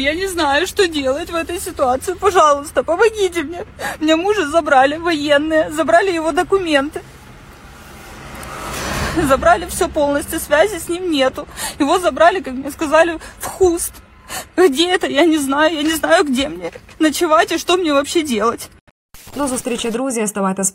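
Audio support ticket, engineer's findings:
Nothing stood out on listening; no findings to raise against any component.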